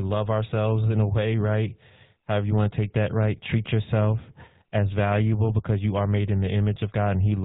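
GSM full-rate codec damage runs through the whole speech clip, from start to finish, and is plainly audible. The codec models the vocal tract as a filter and excites it with a coarse pulse train that keeps only every third sample of the excitation, so the fine detail of the voice is thrown away. Nothing above 4 kHz survives. The result is a buzzy, gravelly roughness over a dull, band-limited sound, which fits a bitrate of about 13 kbps.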